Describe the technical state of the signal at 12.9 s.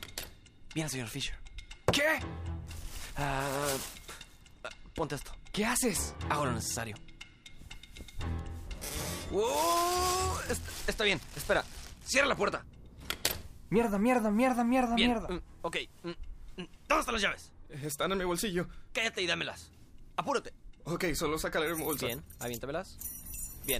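The signal is intact at 12.9 s, with no dropout, distortion or other fault audible at that moment.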